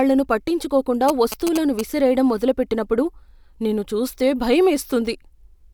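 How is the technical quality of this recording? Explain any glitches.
The recording has one glitch, GSM signalling bursts. From 1.09 to 1.81 s a galloping run of short buzzes at about 217 Hz sits under the speech, roughly 10 dB below it. A nearby 2G phone exchanging signalling bursts is being rectified by the audio circuitry.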